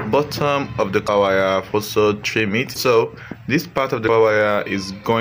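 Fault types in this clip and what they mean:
Broken MP3 bit reservoir: three brief disruptions, at 1.06–1.09 s, 2.73–2.76 s and 4.06–4.09 s, each roughly one 26.1 ms frame long, where the audio skips forward. The likely cause is missing frames, leaving the next frame to decode data borrowed from another frame.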